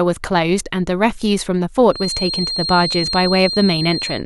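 From about 1.88 s to the end there's a feedback whistle, a thin, steady tone near 4.2 kHz sitting only a few dB under the speech and swelling and fading slowly in level. Likely the speaker-to-mic loop is hovering right at the edge of howling without tipping over.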